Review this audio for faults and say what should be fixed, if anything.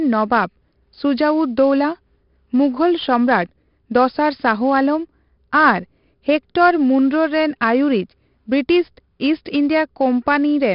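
A gritty hiss follows every loud passage of the speech throughout, with roughness on sharp attacks and a dull top end with nothing above 5.3 kHz. This is heavy 4-bit ADPCM compression. Each sample is a coarse step from a prediction, so the error rises and falls with the level. The bandwidth points to a sample rate near 11 kHz. To prevent it, keep the recording at full rate and use a modern codec instead of ADPCM.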